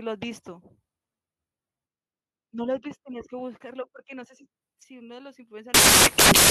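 Samples built from the wrong bytes from 5.74 s to the end: misassembled byte order promotes the jittery low bits, turning the speech into loud, harsh broadband noise.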